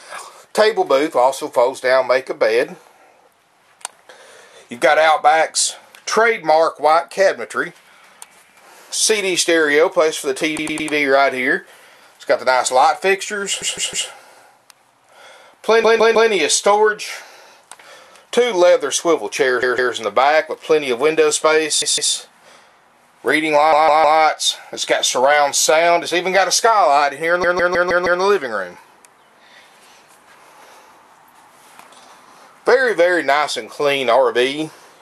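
Repeated frames stutter the sound at 10.58, 13.61, 15.83, 19.62, 21.82, 23.72 and 27.43 s. Blocks of about 105 ms, then 157 ms, replay two to five extra times, adding about 3.1 s. Unlike a dropout, nothing is lost: identical segments recur, lengthening the audio.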